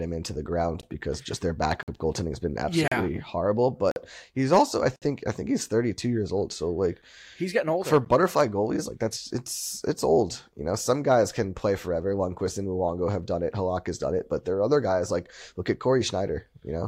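Speech clip with gaps between stream segments: hard-edged silent holes of about 15 to 60 ms at 0.82, 1.83–1.88, 2.88–2.92, 3.91–3.96, 4.96–5.02 and 8.05 s, recurring near 1 s segment boundaries where timestamps leave unfilled space.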